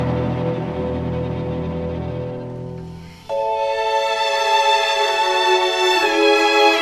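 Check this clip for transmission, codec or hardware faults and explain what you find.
No faults found.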